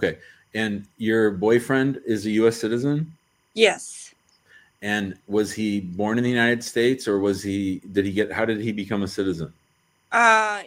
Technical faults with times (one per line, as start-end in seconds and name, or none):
0.00-10.67 timecode bleed